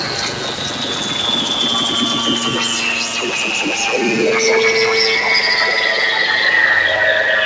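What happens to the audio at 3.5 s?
At 3.5 s the sound pumps and thins: held tones and tails sink by about 5 dB while attacks pass. A noise suppressor applied to music or sounds, active across the whole clip, is mistaking the steady content for noise and turning it down.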